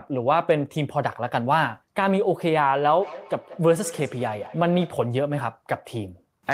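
From 3.01 to 5.1 s there is feedback echo between two devices. One device replays the other's microphone, which picks it up again. Repeats arrive about a fifth of a second apart, peaking about 16 dB below the speech.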